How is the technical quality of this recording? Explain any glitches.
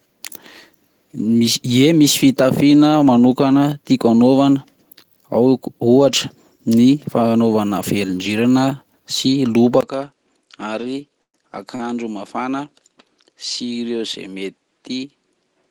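The recording's quality drops in the last third, with a change of tone and three brief interruptions to the speech.

From 9.81 s to the end, the sound becomes duller and slightly quieter, by roughly 5 dB, with nothing above 10 kHz and a faint new noise floor about 50 dB down. A 20 ms silence marks the change. This is likely an input switched to a poorer device, a narrower-band microphone with its own level and noise.

Between 10.81 and 10.85 s, and again between 11.76 and 11.82 s, a sound is held slightly too long. These are short stalls from a late packet. The receiver stretched the last audio by 17 ms and then 40 ms, so nothing is lost and the timing shifts.

From 11.22 to 11.36 s, the speech stops, trails into a fading buzz or hiss, and drops to about 80 ms of silence before resuming where it left off. This is likely a call audio freeze: delayed packets emptied the jitter buffer, inserting 117 ms of gap with nothing missing.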